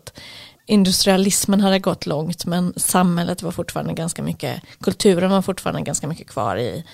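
No technical faults can be heard anywhere in the recording. The speech runs without any audible interruption or damage.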